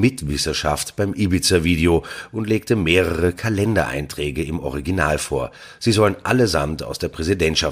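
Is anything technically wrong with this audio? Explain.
No, nothing in this speech recording stood out as a technical problem on listening.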